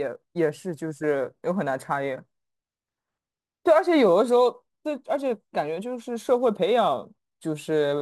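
Sample clock jitter runs through the whole speech clip: the converter's clock wobbles by roughly 5 microseconds, so samples land a touch off-time and leave a grainy hiss about 35 dB under the signal, strongest on loud, bright sounds and gone in the gaps.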